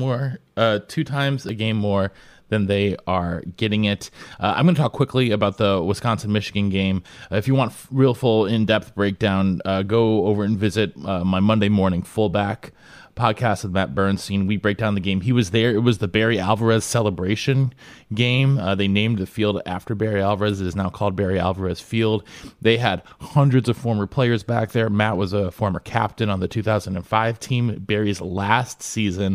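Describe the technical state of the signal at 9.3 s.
At 9.28 s, between "real full in depth" and "uh go over and", a small jump points to a likely dropped buffer (overrun), about 10 ms of audio lost and spliced shut without silence, unlike an underrun's gap.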